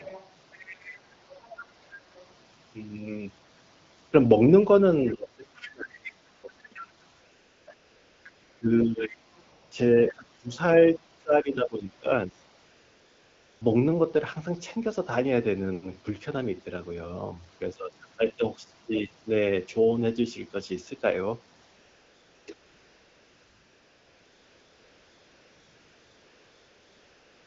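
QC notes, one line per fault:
0.00–0.97, 1.30–1.66, 2.16–2.26, 6.05–6.09, 10.49–10.54 s: other side's voice leaking through. A second voice sits roughly 15 to 35 dB below the talker. This is likely residual loudspeaker echo that the echo canceller left in the microphone signal.
5.08–9.18, 10.08–10.50, 10.94–12.40 s: speech suppressed in double talk. The talker's level dips and breaks up, by as much as about 30 dB in the first stretch and less later. The likely cause is the canceller attenuating both sides while the far end was also talking.
6.35–27.47 s: AMR comfort noise, twelve spans in all. There are brief 20–80 ms inserts near 6.35–6.75 and 11.23, 0.3–1.1 s gaps between 7.11 and 13.61, then 21.65–22.47 and from 22.53 to the end. Smooth synthetic noise replaces the real background wherever speech frames stopped.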